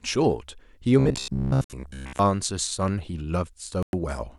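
From 1.0 to 2.19 s the speech takes on a robotic sound from repeated short buffers: a rigid, metallic buzz near 67 Hz that still roughly traces the syllables. The likely cause is audio arriving too seldom, so playback loops a fragment of about 15 ms while the real signal is skipped, and most of this stretch is repetition. A spectrogram shows evenly spaced harmonic lines locked to that 67 Hz fundamental, and the waveform shows one short shape copied over and over.

Inside that stretch, at 1.64 s, a Bluetooth stall drops the sound to silence for 55 ms, and a second one at 3.83 s lasts 105 ms. Each is likely interference delaying packets until the headphone buffer ran dry, so playback paused and then resumed. On a waveform these appear as flat, near-silent gaps with abrupt edges. On a spectrogram they show as clean vertical blank bands across all frequencies.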